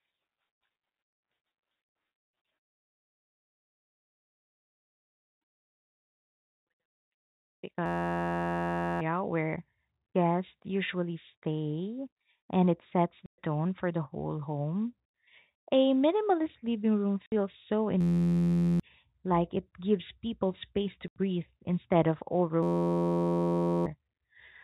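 From 7.86 to 9.01 s the speech locks into a system hang loop. The driver or host stalled while the audio hardware kept replaying one 11.61 ms slice of its ring buffer, which fits a 512-sample buffer. It sounds like a steady buzz at 86.1 Hz that replaces roughly a second of speech. The same fault returns from 18.01 to 18.80 s, covering about 0.7 s, and from 22.63 to 23.86 s, covering about 1.5 s.

Between those stalls there are three holes from packet loss filled with silence: 13.26 to 13.38 s (120 ms), 17.26 to 17.32 s (60 ms) and 21.08 to 21.16 s (80 ms). Each gap is a multiple of 20 ms, which points to 20 ms packets. Lost packets were replaced with digital silence, so the speech drops out abruptly with hard edges on each gap. The G.711 mu-law telephone coding keeps the whole clip within the narrow band below 4 kHz.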